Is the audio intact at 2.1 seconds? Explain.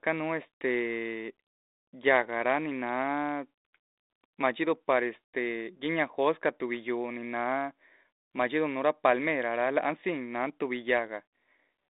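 Yes, at 2.1 seconds the speech is intact, carried through G.726 ADPCM at 32 kbit/s within a telephone band of roughly 250 Hz to 3.7 kHz, with only the light coding noise that rate leaves behind.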